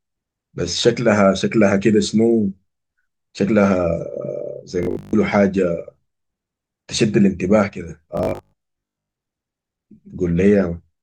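Audio likely arrived too seldom, so short 20 ms buffers were replayed in place of most of the speech from 4.83 to 5.13 s and 8.17 to 9.13 s, producing robotic sound from repeated short buffers: a rigid, metallic 50 Hz buzz.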